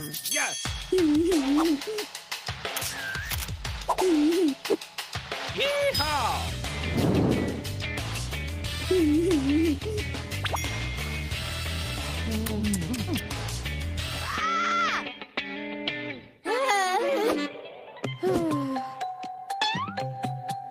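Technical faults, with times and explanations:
No technical faults are audible at any point, and the signal runs unbroken from its opening moment to its close.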